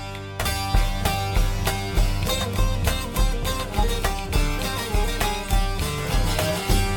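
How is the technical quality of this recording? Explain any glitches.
No glitches are audible anywhere in this music recording, and there are no technical faults to explain.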